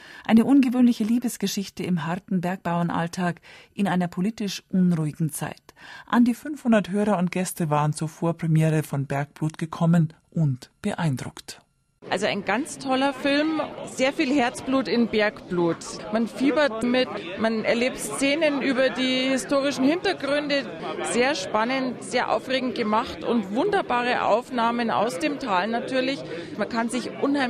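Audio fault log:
6.36 to 27.50 s, wrong sample rate. From 6.36 s onward the sound slows and drops in pitch together. It runs at about 0.92 times its proper speed. The pitch falls by roughly 1.5 semitones. Both change by the same ratio because the samples are replayed at the wrong rate with no conversion. The ratio fits 48 kHz material played back at 44.1 kHz. The result is lower and more sluggish than intended.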